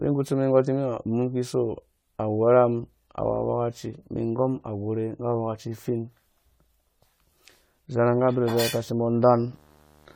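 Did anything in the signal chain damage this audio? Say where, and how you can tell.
Yes. Throughout the clip the speech sounds swirly, smeared and hollow, with softened consonant attacks, and there is no content above 20 kHz. This is generation loss at the codec stage, likely from the audio being decoded and re-encoded several times with AAC-LC. The damage fits a 64 kbit/s chain, but it is worse than one pass at that rate would cause. Each re-encode quantises on a shifted frame grid, so noise and spectral holes pile up, which is what separates this from a single low-bitrate encode.

From 8.05 s to the end at 10.15 s, a buzz at 75 Hz with hash above it sits about 35 dB below the speech. This is video or display buzz picked up in the analogue wiring, where a screen or video cable couples into the audio line. The 75 Hz fundamental matches a display field rate rather than 50 or 60 Hz mains, and the added hash distinguishes it from plain mains hum.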